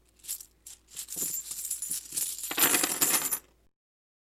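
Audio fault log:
throughout: block size mismatch (padded). Each block read is only partly filled, leaving a short zero gap every cycle. The repeating gaps give a 43.1 Hz buzz, which fits a 1024-sample read block, and stretch playback to 0.938x speed at nearly unchanged pitch.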